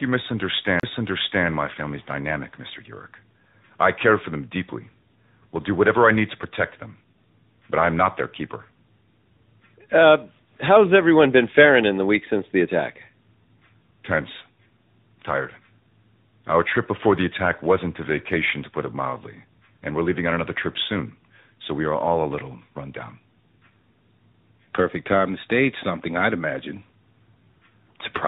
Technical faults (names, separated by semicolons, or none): tandem speech coding; CD skip